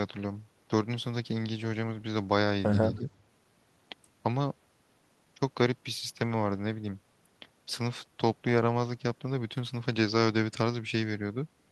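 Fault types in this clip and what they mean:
Echo leak: A faint, delayed copy of the speech surfaces briefly between 2.95 and 3.09 s, trailing the original by about 290 ms and sitting roughly 25 dB below it, likely because a loudspeaker-side echo canceller let part of its microphone pickup travel back.
Speech suppressed in double talk: From 2.99 to 3.07 s the speech level sags briefly, by around 5 dB at its deepest, for well under a tenth of a second, likely an echo canceller turning down the talker along with the echo while both sides were active.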